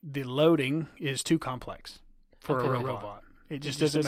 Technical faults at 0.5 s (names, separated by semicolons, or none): none